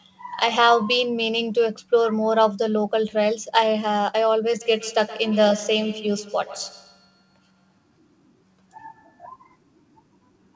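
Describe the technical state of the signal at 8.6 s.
At 8.6 s you're inside a feedback echo between two devices, running from 4.61 to 9.32 s. A second device replays the call and the mic picks it up again, so each bit returns roughly every tenth of a second, thinner and ringing, peaking about 17 dB under the speech.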